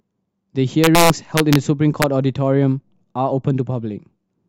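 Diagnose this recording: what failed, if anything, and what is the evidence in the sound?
Integer overflow in a fixed-point gain or sample-format conversion stage: from 0.84 to 1.56 s and again at 2.02 s, loud speech peaks pushed about 2 dB past full scale wrap to the opposite sign. That produces violent cracks rather than clipping's flattened, buzzy distortion.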